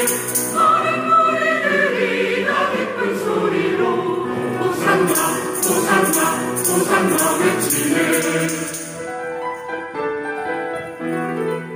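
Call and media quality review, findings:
Channel delay (comb filtering), 8.21 s to 10.37 s. Top end dulls. One channel lags by roughly two samples, a tiny fraction of a millisecond, then both are summed to mono. Shared content cancels at evenly spaced frequencies. First notch near 10 kHz. Check stereo alignment before downmix.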